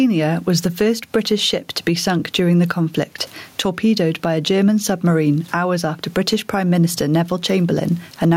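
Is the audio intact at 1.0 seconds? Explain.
No. Gain pumping runs through the whole clip, including 1.0 s. The likely cause is gain set far too high, with a fast limiter pulling it down on each loud sound. Unlike a noise gate, which cuts the background out, this leaves the room noise, about 44 dB below the speech, in the gaps, and the level swings by about 15 dB.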